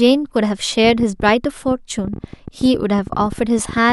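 A speech recording carries a train of clicks from 0.85 s to 3.91 s: around forty sharp ticks at an uneven 13.4 per second, peaking roughly as loud as the speech and persisting through its pauses. The likely cause is electrical interference from nearby equipment or a faulty connection or power supply. On a spectrogram they appear as thin, broadband vertical lines at irregular spacing; the waveform shows narrow spikes of similar shape reaching about the level of the surrounding signal.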